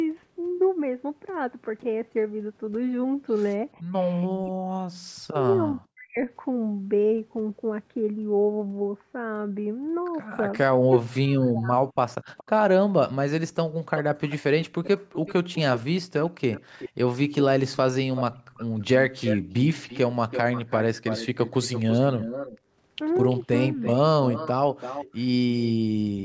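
At 3.79 to 3.94 s the room background dips by about 20 dB for 150 ms: background gated by the echo canceller. From 4.38 to 6.21 s and 10.65 to 11.87 s the speech itself drops by as much as forty decibels for roughly a second each time. This is likely speech suppressed in double talk, with the canceller ducking the talker while the far side also spoke. A likely echo leak follows: a faint copy, around 25 dB down, at 12.37 to 12.44 s delayed 421 ms, then from 13.96 to 25.72 s a stronger copy about 10 dB down, delayed 334 ms. Unlike a level drop, this adds a repeated voice trailing the original.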